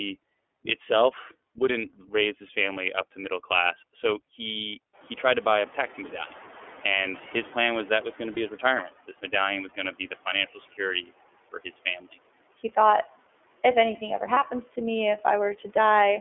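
Throughout, the iLBC codec limits the sound to roughly 300 Hz to 3.4 kHz, which fits its 13.33 kbps, 30 ms frame mode. Each frame's excitation is coded independently, and the damage is plainly audible as a rough, slightly synthetic texture on the speech.

At about 5 s the room noise jumps by about 17 dB, though it stays about 20 dB below the speech. From 4.93 to 8.92 s the noise suppressor is catching up. Its noise estimate lags the rise, so the noise first comes through with little reduction, then sinks by about 11 dB over roughly 4 s as the estimate adapts.

From 8.34 to 8.38 s there is a lost iLBC frame, 30 ms, consistent with one dropped packet. The decoder fills it by repeating the last pitch cycle mixed with noise, heard as a brief held, buzzy vowel, and the next frame decodes cleanly at once.

Speech is cut by the noise suppressor at 9.08 to 9.33 s, 10.55 to 10.80 s and 11.52 to 12.18 s. 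The suppressor misreads quiet speech as background, pulling it down by about 10, 14 and 14 dB respectively. About a tenth of a second is affected in each of the first two spans and about a third of a second in the last. The affected speech sounds swallowed or faint.

A second lost iLBC frame falls at 14.34 to 14.38 s, between "thought if anything ever" and "to me". It is again a 30 ms concealment gap that sounds like a short, buzzy sustained vowel, with the speech recovering immediately afterward.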